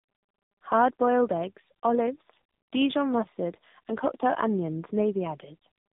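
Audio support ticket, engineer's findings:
Tandem speech coding across the whole clip: a G.729A leg, G.711 mu-law transit, then re-encoded as AMR-NB at 10.2 kbit/s, so two low-rate speech codecs are stacked. The second coder models already-damaged speech. Result: rough, muffled, warbly voice, with nothing above 3.8 kHz.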